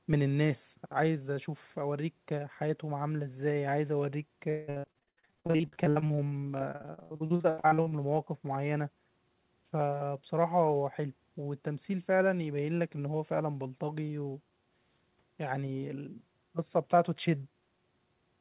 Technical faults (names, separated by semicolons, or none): repeated packet loss (robotic sound)